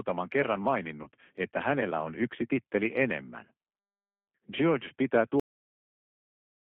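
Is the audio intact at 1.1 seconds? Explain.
No. From 1.03 to 1.09 s, VoIP packet loss concealed by the speech codec fills a gap of about 30 ms, consistent with a single lost packet. The decoder extrapolates its last pitch and filter into a fading buzzy tone or coloured noise, and recovery is still settling as "että hänellä on yksi" begins. The whole clip also carries the G.729 codec at 8 kbit/s, which confines the sound to roughly 200 Hz to 3.4 kHz and gives it a plainly rough, synthetic texture.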